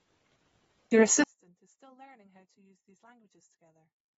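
From the start, the speech has plainly audible codec damage, likely from AAC compression. Nothing is present above about 7.6 kHz, so the top octave is missing and the sound is dull. The coder has discarded spectral detail it judged inaudible, leaving smeared, warbling sibilants and vowels. That combination of low cut-off and coarse quantisation fits an AAC-LC stream at around 24 kbps.

At 1.24 s the level drops by about 35 dB and stays down to the end of the clip. That is consistent with a mono sum of stereo in which one channel is inverted, the likely cause. The material common to both channels cancels, so the centred speech almost disappears. What remains is a faint residue made of the small differences between the left and right channels.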